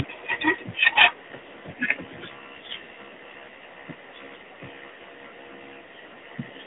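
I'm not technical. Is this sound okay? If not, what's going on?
No. The audio was squeezed through the AMR narrowband mobile codec, the compression older mobile phone networks use, and it stays that way for the whole clip. That system keeps only a narrow strip of the sound, roughly 200 Hz to 3.6 kHz, with nothing above about 3.8 kHz. The speech therefore sounds muffled and boxy, like an old phone call, and the compression damage is plainly audible as a buzzy, artificial quality.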